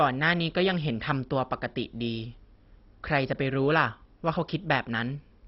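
A speech clip with MP2 compression damage running throughout. Nothing is heard above 5.6 kHz, so the voice sounds dull. The remaining sound has a gurgling, granular texture. This is likely MPEG Layer II coding at a very low bitrate. The codec splits the signal into 32 sub-bands and rations bits among them. Here the upper bands get none and vanish. The surviving bands are coarsely quantised. The damage is heavy, which fits a rate near 32 kbps.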